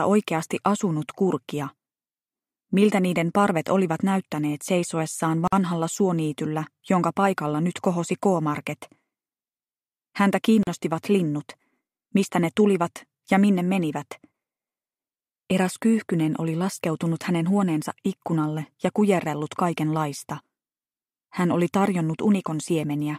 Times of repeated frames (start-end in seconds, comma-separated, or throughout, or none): none